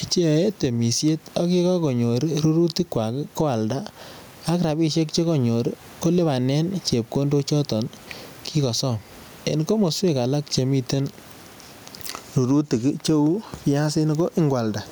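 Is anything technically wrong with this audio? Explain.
Yes. Gain pumping runs through the whole clip. The speech itself sounds squashed, with loud and quiet passages pressed close together. The likely cause is input gain set far too high, with a fast limiter or compressor clamping down on each loud sound and releasing in the gaps. The swing is roughly 15 dB. The room noise sits about 37 dB under the speech.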